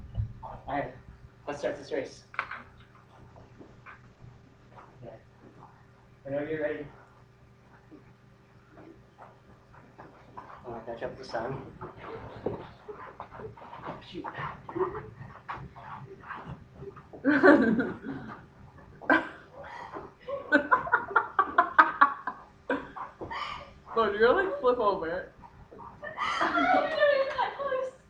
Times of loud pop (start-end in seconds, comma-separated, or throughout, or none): none